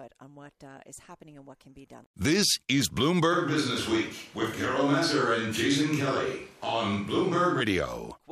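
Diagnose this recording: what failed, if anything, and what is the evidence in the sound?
Switch to a distant microphone, 3.34 to 7.59 s: speech suddenly turns roomy and bass-light, room noise roughly 30 dB down, likely from a dropped close-mic analogue feed.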